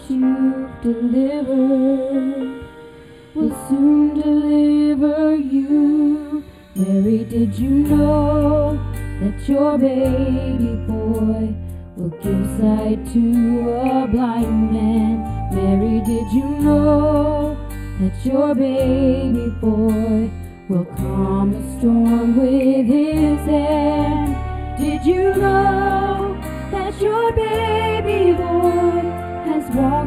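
All the way through, there's channel delay (comb filtering): one side lags the other by roughly a tenth of a millisecond, a few samples' worth, and the mono sum cancels at evenly spaced notches starting around 5 kHz. The top end sounds hollow and phasey.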